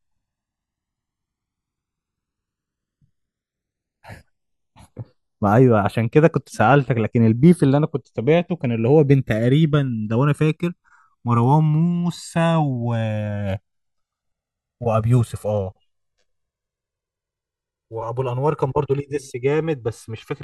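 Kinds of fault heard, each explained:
Channels drifting apart: The two channels seem to run on separate clocks, which fits an error of roughly 200 parts per million. Their offset grows across the clip to about 3 ms. In mono, comb notches sweep slowly through the speech, heard as slow flanging.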